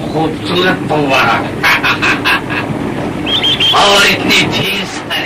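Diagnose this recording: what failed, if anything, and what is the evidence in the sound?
One channel drops out from 4.62 s to the end at 5.25 s: the level falls abruptly by about 6 dB and stays down. That step fits one side of a stereo feed going dead before the mono sum, likely a failing analogue connection, so only the surviving channel's half of the shared content remains.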